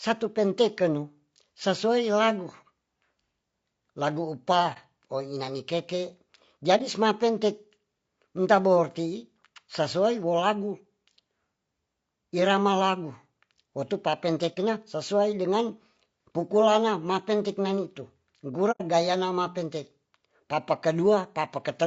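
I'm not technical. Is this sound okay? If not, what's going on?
No. The whole speech clip sounds rough and grainy, with a hiss between the tones of the voice and a dull or artificial top end. This likely comes from low-delay AAC compression, the kind used in video calls, squeezed hard.

There are also four short holes from AAC frame loss with muting. Bits of audio went missing, and the sound fades out and back in. They come at 4.73 s, 6.77 s and 14.54 s, just before "sesuai dengan pukulana mateng", and a longer one at 18.71 to 18.82 s, just before "gayana mapentek".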